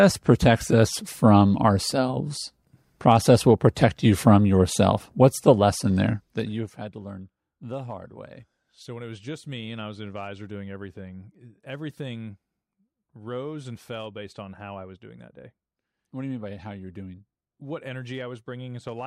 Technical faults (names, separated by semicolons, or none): none